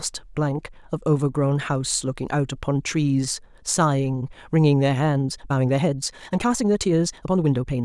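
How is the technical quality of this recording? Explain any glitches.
The recording has one clear glitch, a time-stretched section running from 5.09 s to the end at 7.84 s. There the speech suddenly moves about 1.51 times faster, sounding rushed, yet its pitch stays put. That unchanged pitch separates it from a plain playback speed-up, which would raise the voice. The likely cause is software squeezing that stretch to fit a shorter length by dropping short slices of audio, which produces the hurried texture.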